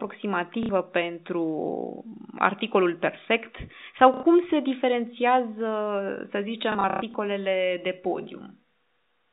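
Packet loss with last packet repeated occurs at 0.63–0.69 s, at 4.14–4.23 s just after "articolul perfect sau", and scattered across 6.72–7.14 s with a longest gap of 120 ms. The receiver loops the last audio it got, producing robotic stutters whose buzz fits 30 ms packets.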